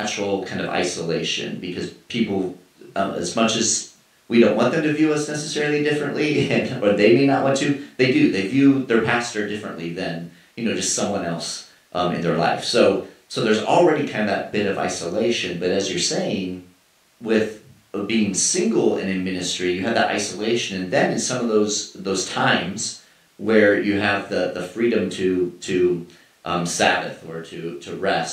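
Speech recording, no technical faults detected.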